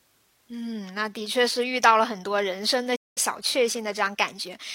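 A playback stall interrupts this speech clip from 2.95 to 3.18 s: the sound cuts out mid-flow for about 200 ms, then resumes. The likely cause is the player running short of data or its output thread being briefly blocked, leaving nothing to play until it recovered.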